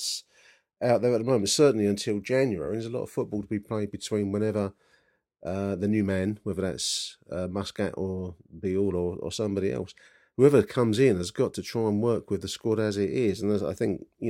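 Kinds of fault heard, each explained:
No technical faults can be heard in this recording.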